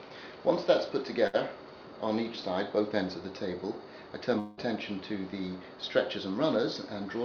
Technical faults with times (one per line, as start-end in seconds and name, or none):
1.27-1.36 burst of packet loss
4.39-4.60 long network dropout